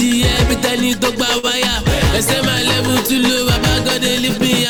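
A packet arrived late at about 1.38 s, so the jitter buffer ran dry and the receiver had to improvise: a short stall from a late packet. It stretched the last sound by roughly 49 ms, holding it until about 1.45 s, then resumed exactly where it had stopped. Nothing is lost, but everything after that point now sits about 49 ms later, and the stretched moment lingers unnaturally with a faint buzzy or dipped quality.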